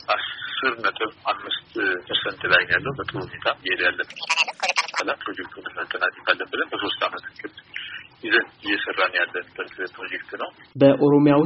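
A section at the wrong speed runs from 4.10 to 5.00 s: that stretch plays 1.78 times too fast, so it turns hurried and jumps up by about ten semitones. The likely cause is an editor or player running that part against the wrong clock.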